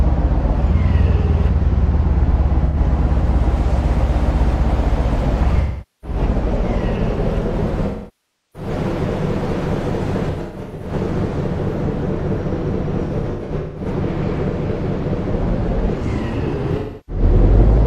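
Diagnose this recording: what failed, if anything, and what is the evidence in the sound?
AAC frame loss with concealment at 2.65, 5.60, 7.86, 10.29, 13.06 and 16.78 s: the decoder lost frames and rebuilt them from the last good spectrum, leaving smeared, phasey patches. The 0.68 s gap at 7.86 s decays toward silence before fading back. The losses at 10.29 and 13.06 s break up into scattered bursts.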